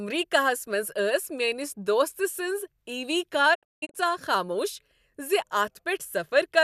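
From 3.53 to 3.96 s, after "دوست سٕنز عی وی", a digital broadcast dropout mutes the speech in several clean holes, 288 ms in total, with 20 ms fades and no hiss, unlike analogue fading.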